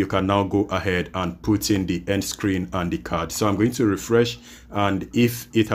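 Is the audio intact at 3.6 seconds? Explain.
Yes, the audio is intact at 3.6 seconds, with no dropout, click, distortion or other fault audible at that point.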